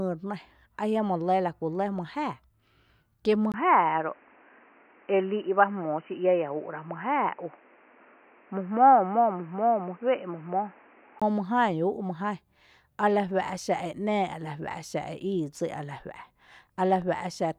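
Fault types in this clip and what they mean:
input switched to a poorer device: The input likely moved to a narrower-band microphone or headset profile, so from 3.52 to 11.22 s the speech loses everything above 3 kHz and turns boxy, with a 20 ms gap at the switch, faint new noise, and unchanged loudness.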